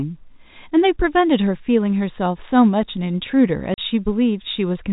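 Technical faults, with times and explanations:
3.74 to 3.78 s, packet loss filled with silence: the speech stops dead for 40 ms and restarts at hard edges. That length fits two lost 20 ms packets, and the receiver played silence in their place. Concealment would have patched the hole with faded or repeated sound, and a level drop would leave some residual signal. This gap is completely empty, within the 4 kHz telephone band of the G.711 coding.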